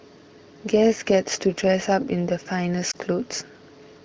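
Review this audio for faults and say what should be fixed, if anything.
A lost AMR speech frame occurs at 2.91 to 2.96 s. Radio errors corrupted a frame so it failed its checksum, and the AMR-WB (HD Voice) decoder concealed the gap by repeating the previous pitch and vocal tract settings at reduced gain. The result is a brief dip or warble. Its length fits a single lost 20 ms frame, and the sound recovers quickly afterwards. To prevent it, improve radio link quality or error protection on the bearer so speech frames arrive intact.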